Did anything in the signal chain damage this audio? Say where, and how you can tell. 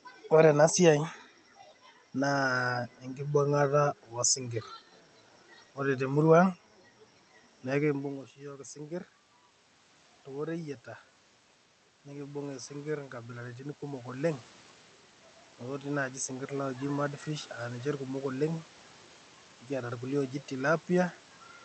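Yes. Automatic gain rising in the call processing: from 12.03 to 14.48 s the level climbs about 6 dB as the gain control, finding the input too quiet, ramps up. Room noise swells with the speech, unlike the talker moving near 7.5 s, where only the voice changes.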